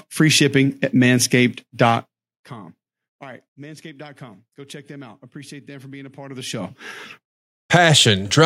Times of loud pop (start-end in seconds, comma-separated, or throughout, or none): none